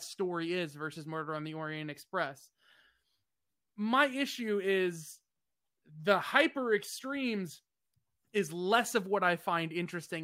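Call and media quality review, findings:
No fault heard in the speech recording. No component or mechanism needs tracing for this ticket.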